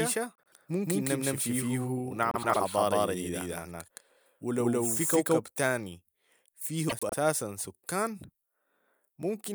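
From the very start until 5.4 s, the speech carries a doubled audio track: a second full-band copy trails the original by about 150 ms at roughly the same loudness. That is likely a second capture over a slower path being mixed back in. Unlike a room echo, the copy has no decay and no added reverberance, and it cuts off abruptly at 5.4 s rather than fading.

Inside that stretch, from 0.38 to 0.55 s, comes the first case of frames out of order. Two neighbouring blocks of about 78 ms each play with their halves swapped, which fits runs of three frames decoded in the wrong sequence. The same fault returns at 2.31 to 2.57 s and again at 6.89 to 7.14 s, this time with blocks of about 105 ms, which points to runs of four frames. Each instance sounds like a brief garbled flutter. What sets it apart from a dropout or a skip is that nothing goes missing: the timing after each event stays intact.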